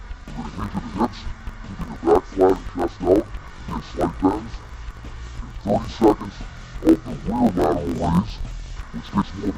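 From start to finish, the audio suffers from interleaved audio read as planar. Each block alternates left and right samples. Here the first half of every block is taken as left and the second half as right. Both halves then play at half speed, side by side. The pitch drops an octave, 12 semitones down, while the overall pace holds. The sound is doubled and choppy. Blocks last 21.33 ms, which fits a 1024-sample block. They repeat at 46.9 Hz.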